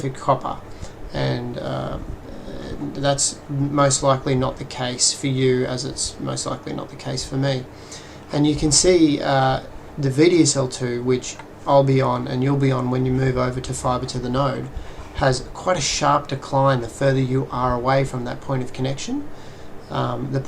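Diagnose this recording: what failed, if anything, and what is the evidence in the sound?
Nothing failed here as far as I can hear: no stage in the chain leaves any audible trace on the sound, so there's no evidence to chase.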